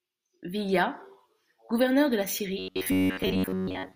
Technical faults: robotic sound from repeated short buffers

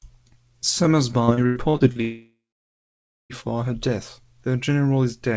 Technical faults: repeated packet loss (robotic sound); long network dropout

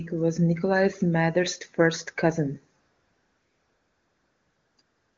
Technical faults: AMR comfort noise

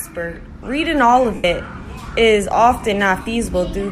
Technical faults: lost LE Audio frames

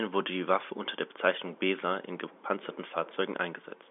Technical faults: none

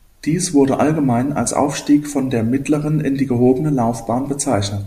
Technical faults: none

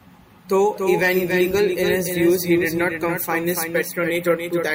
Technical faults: doubled audio track

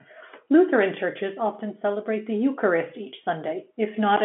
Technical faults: none

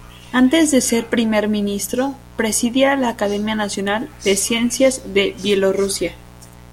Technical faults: mains buzz

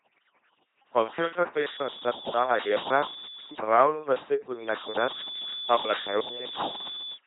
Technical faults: overdone noise removal; LPC-10 vocoder

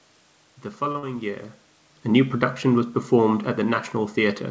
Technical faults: short stall from a late packet; short concealed packet loss; automatic gain falling

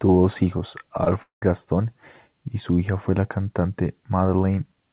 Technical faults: short concealed packet loss; long network dropout

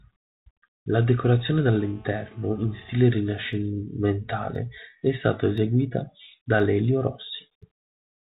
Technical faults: GSM phone buzz; periodic USB or driver dropouts

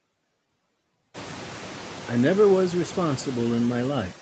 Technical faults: noise suppressor artifacts

